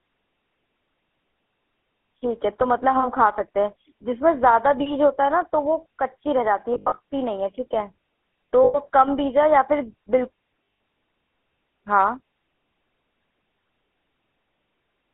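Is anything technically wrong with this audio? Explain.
Yes. The speech is coded with the GSM full-rate codec throughout, and there are three bursts of lost GSM frames.

GSM full-rate codec: Across the whole clip, a vocal-tract model excited by coarse, regularly spaced pulses gives a plainly audible buzzy, gravelly grain. This roughness, and not just the narrow 200 Hz to 3.4 kHz line band, sets it apart from simple telephone filtering. The bandwidth fits a 13 kbit/s codec.

Lost GSM frames: From 6.74 to 6.99 s, losses totalling about 180 ms are scattered over 240 ms, with the longest run around 70 ms. A 100 ms loss runs from 8.64 to 8.77 s. From 10.64 to 10.80 s, about 140 ms is lost, with the longest run near 100 ms. In each, the decoder repeats the last good frame's settings. The result is a brief rough, metallic ring in place of a clean silent gap, which distinguishes it from an ordinary dropout.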